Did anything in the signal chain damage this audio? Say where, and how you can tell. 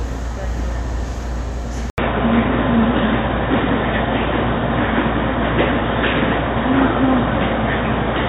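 Yes. From 1.9 s, after an 80 ms gap, the sound turns dull and boxy, with nothing above 3.8 kHz, a level shift of roughly 5 dB and a new noise floor about 45 dB down. This likely points to the input switching to a poorer device. A spectrogram shows the top band abruptly cut at the switch.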